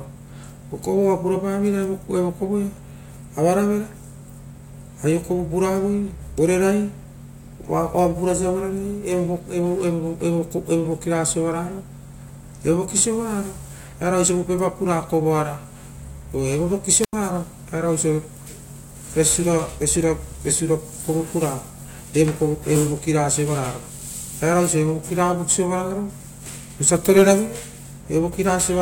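At 17.01 s the speech breaks up in a wireless microphone squelch dropout lasting until 17.13 s. The RF signal from the analogue FM transmitter faded far enough that the receiver's squelch circuit closed and muted its output. There is a brief rise of hiss as the carrier weakens, followed by a hole of near silence of about 82 ms. The speech then returns as the signal recovers and the squelch reopens.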